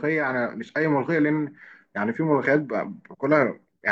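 Listening to this short speech recording, nothing stood out as a technical problem at any point.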